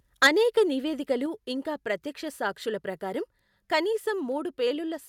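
Microphone overload, 0.22 to 0.28 s, just before "అనేక నివేదికలు ఇంకా ప్రత్యక్ష": peaks run about 10 dB past the converter's limit and a good share of samples are flattened, giving a harsh crackle, likely from input gain set too high. Microphone volume stepped down at 0.27 s and again at 1.26 s, between "అనేక నివేదికలు" and "ఇంకా ప్రత్యక్ష సాక్షుల ప్రకారం": the voice and background each drop abruptly by about 3 dB, likely the call software cutting the input level after finding the microphone too loud.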